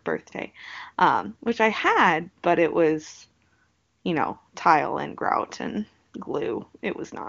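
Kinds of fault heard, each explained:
No faults detected; the speech carries the band-limited but clear character of a high-rate AMR wideband (HD Voice) path.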